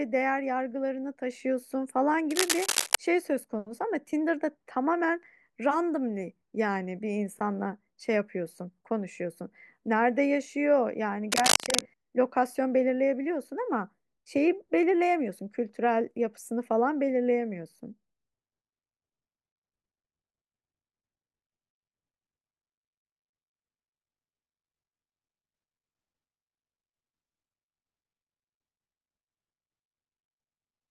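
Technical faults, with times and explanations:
2.31–2.95 s and 11.32–11.81 s, cable scratch noise: two bursts of scratching and rustling sit over the speech, roughly as loud as the speech itself. The likely cause is a worn cable or connector being moved, with its contact resistance changing rapidly. On a spectrogram each burst shows as a dense, ragged smear of broadband energy. In the waveform, irregular spiky clusters ride on top of the speech envelope.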